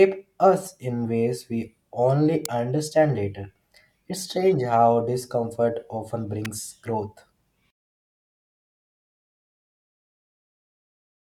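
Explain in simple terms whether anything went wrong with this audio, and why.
A couple of things went wrong. At 2.45 s, between "in ways we only" and "understand later", and again at 6.45 s, right after "strange how discomfort often", there's a sharp snap, an electrical switching spike, likely from a nearby switch or motor arcing into the line. The fade-out that starts around 7.7 s suffers from truncation distortion on a fade. From about 7.7 s, and worst after 7.84 s, the quiet tail turns gritty because the volume stage keeps too few bits, which fits an 8-bit stage.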